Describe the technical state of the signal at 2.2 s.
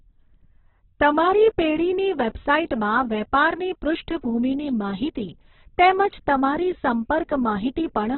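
At 2.2 s, as throughout, the speech is band-limited with nothing above 4.1 kHz. It sounds rough and grainy, likely from heavy Opus compression at a very low bitrate.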